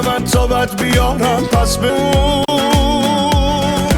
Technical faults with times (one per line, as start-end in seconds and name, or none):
1.89-1.91 skip ahead
2.43-2.51 intermittent contact